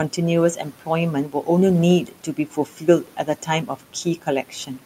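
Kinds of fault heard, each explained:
Speech cut by the noise suppressor: the suppressor treated parts of the speech as noise. Five stretches drop by about 10 to 12 dB and sound swallowed.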